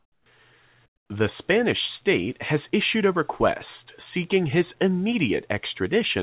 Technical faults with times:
0.00-0.26 comfort noise in place of the background
0.86-1.10 comfort noise in place of the background

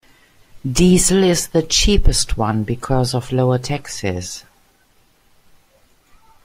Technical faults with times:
none

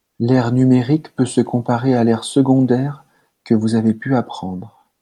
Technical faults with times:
none

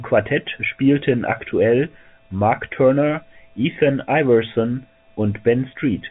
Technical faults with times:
none

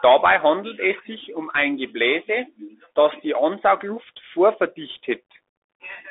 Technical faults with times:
0.00-6.11 Bluetooth CVSD headset codec

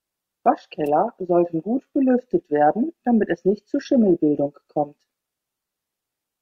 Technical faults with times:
0.86 electrical switching spike

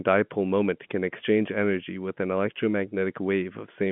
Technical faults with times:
none

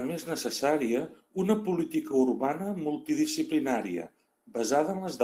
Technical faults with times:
0.91-1.01 lost packet rebuilt from error correction

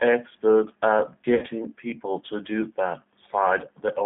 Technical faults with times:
0.00-4.06 G.729 codec
1.35-1.45 VoIP packet loss concealed by the speech codec

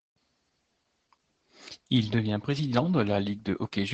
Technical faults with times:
0.00-3.94 Opus voice compression

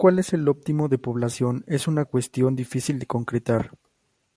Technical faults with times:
none

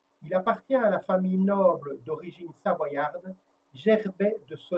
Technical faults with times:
0.00-4.78 low bit depth without dither

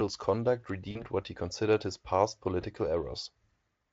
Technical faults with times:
0.91-1.05 VoIP packet loss concealed by the speech codec
2.61-2.64 VoIP packet loss concealed by the speech codec

